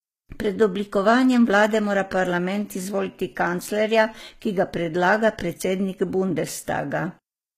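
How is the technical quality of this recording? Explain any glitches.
The quality is limited by an earlier encoding rather than by the file's own format. The fault runs through the whole speech recording and is most likely low-bitrate audio saved at a high bitrate. The audio seems to have passed through a very low-rate codec, its character fitting something like HE-AAC around 20 kbit/s, and was then re-encoded as a generous MP3. The larger file cannot put back what the first pass discarded. Nothing sounds above 14.9 kHz, and the artefacts of the first encoding remain throughout.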